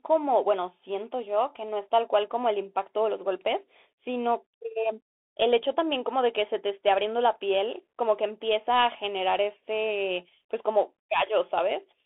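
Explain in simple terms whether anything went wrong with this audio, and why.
Throughout the speech, the sound has passed through a Bluetooth CVSD headset codec, the basic codec that phone headsets fall back to. It describes the signal only as a fast series of up or down steps, and it keeps just a narrow band of roughly 250 Hz to 3.5 kHz. The speech sounds thin and boxy, s sounds turn scratchy, loud sharp moments distort, and a grainy hiss sits underneath the whole time.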